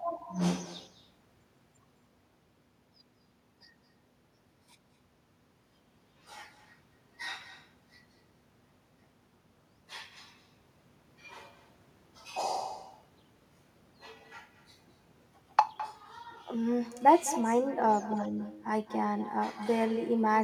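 Throughout the recording, every phrase is trailed by a fainter, hollow copy arriving about a fifth of a second later, the classic sound of echo with no canceller. The far end is playing the call over a loudspeaker, its microphone captures that playback, and nothing subtracts it, so the talker's own speech returns after the network round trip at about 15 dB down. On a waveform each syllable has a smaller ghost shortly after it, and a spectrogram shows faint, thinner duplicates of the speech patterns shifted right.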